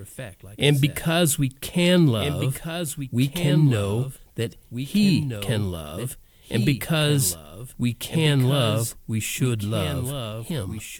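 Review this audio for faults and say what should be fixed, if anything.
A doubled audio track runs through the whole speech clip: a second full-band copy trails the original by about one and a half seconds, roughly 10 dB quieter, with no reverberant tail or room colouring. The likely cause is the same signal reaching the mix twice, once through a slower capture or monitoring path. On a spectrogram the harmonic and consonant patterns reappear as fainter, identical shapes shifted right; the waveform shows each burst echoed as a smaller replica. To prevent it, route each source through a single capture path and mute any delayed return or duplicate track before mixing.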